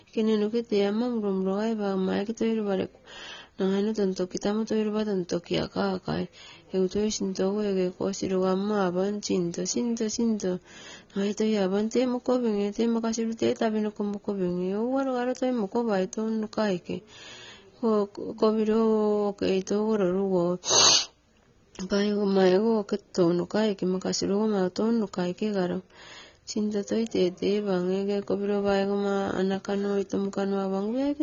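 A speech clip with AAC compression throughout: nothing above 6.9 kHz and smeared, warbling sibilants, likely AAC-LC coding at a low bitrate around 24 kbps.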